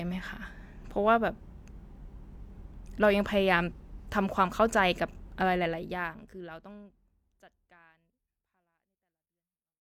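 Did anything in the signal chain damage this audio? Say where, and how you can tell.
Yes: a brief glitch at 3.67–3.73 s points to damaged data in a compressed stream, where the decoder lost frame sync and jumped to the next header.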